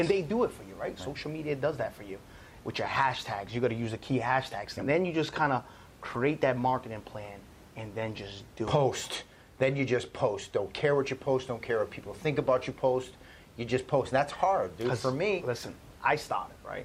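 Nothing goes wrong in this speech recording, and the only other thing you'll notice is a bit of room noise sitting about 23 dB under the talking.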